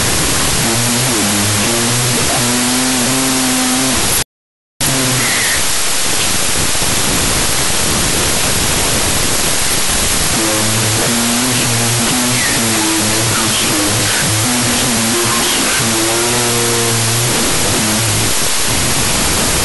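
Throughout the clip, a wrong sample width fault turns the speech into loud noise. The sound points to 32-bit float data read as 16-bit integers. Each sample splits into two mismatched values, so playback runs at 0.5 times speed, an octave low.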